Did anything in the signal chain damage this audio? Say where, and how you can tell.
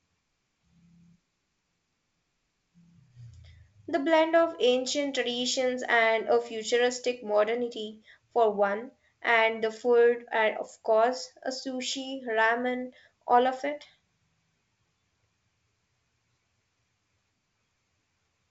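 Yes. Bit errors on the ADPCM link, in transmission, cause a pop and rough burst from 10.72 to 10.78 s as the decoder's step size misadapts, showing as a broadband spectrogram smear.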